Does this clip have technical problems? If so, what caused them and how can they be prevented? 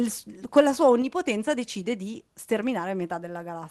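Yes. At 1.02 s, between "la sua" and "decide di", the speech and background drop together by about 4 dB in one step, likely a microphone volume stepped down by the call software's automatic input control after it judged the level too hot. Disabling automatic microphone gain adjustment and setting a fixed, moderate input level prevents this.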